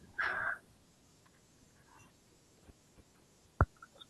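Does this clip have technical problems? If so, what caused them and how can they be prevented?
No, no technical faults here.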